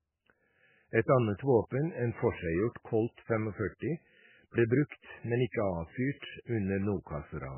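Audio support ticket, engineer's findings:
Watery, swirly speech, nothing above 3 kHz, throughout. Likely MP3 compression at a very low bitrate, around 8 kbps: treble cut, weak frequency lines dropping in and out between frames.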